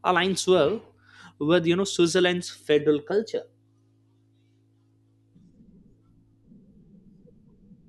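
From 3.12 to 6.72 s, right after "switzerland's federal", the speech shows a wrong sample rate. Audio recorded at 44.1 kHz is played out at 48 kHz with no conversion. The passage runs 1.09 times fast and sits about 1.5 semitones high, so it sounds hurried and slightly higher.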